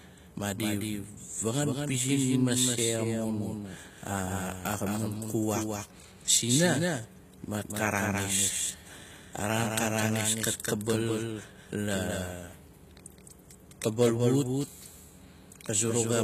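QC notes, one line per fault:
Throughout, doubled audio track: the speech is accompanied by a second, full-band copy about 200 ms behind and roughly 5 dB quieter. Unlike an echo or reverb, there is only one repeat, with no decay tail and no room colour. It is the same signal heard twice at a fixed offset. This is likely a second capture through a slower path, or an edit holding two copies out of step.
Throughout, HE-AAC compression: the codec damage is plainly audible. The treble stops at 14.9 kHz, which is higher than a plain low-bitrate AAC or MP3 lowpass would allow, yet the top end sounds synthetic. That points to spectral band replication, where upper bands are rebuilt from copied lower ones, so harmonics fail to line up and s sounds turn gritty or lispy. The result fits a low bitrate around 20 kbps and is likely the cause.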